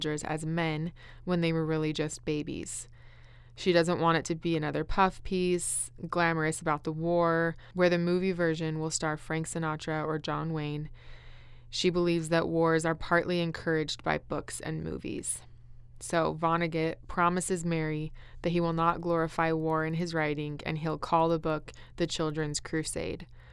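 From 18.8 s, just after "that he will", and running to the end at 23.52 s, the resampler restarted on every block. The 48 kHz to 24 kHz conversion was run on each 100 ms block in isolation, so the filter lacked the real neighbouring samples at every block boundary and left a small error there. The result is a steady tick at 10 Hz riding on the speech, present only while there is signal.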